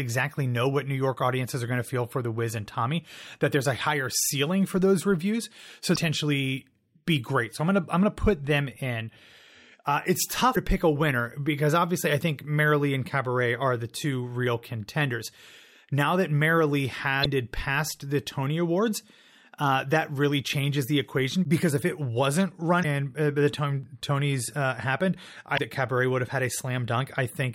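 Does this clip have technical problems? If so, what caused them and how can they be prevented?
Yes. Damaged data in a compressed stream causes brief glitches at 5.92, 10.52, 17.20, 22.79 and 25.54 s, each about 56 ms, as the decoder loses frame sync. To prevent this, verify file or stream integrity with checksums and use error-protected transport.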